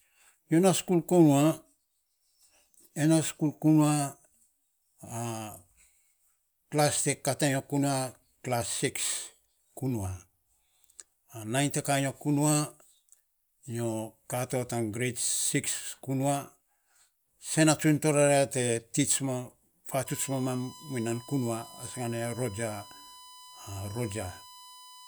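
USB whine enters at 20.06 s and runs to the end at 25.07 s: a steady, fixed-pitch tone at 1 kHz, roughly 20 dB below the speech. The bus's 1 ms frame cycle draws current rhythmically, and that ripple leaks through shared power or ground into the audio.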